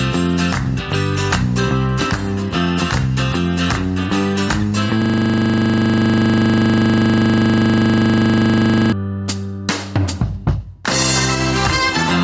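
Throughout the audio there's gain pumping: the level ducks by about 10 dB under each loud sound, so everything feels squashed and flattened in level. The likely cause is gain set far too hot at the mic with a fast limiter clamping down on the peaks. From 5.02 to 8.92 s there's a system hang loop: a single 40 ms slice of audio repeats nearly a hundred times, producing a steady 25 Hz buzz. That's what you'd hear if the computer or driver froze while the sound hardware kept cycling one small ring buffer. The call-style mic processing is audible too, with nothing above 8 kHz.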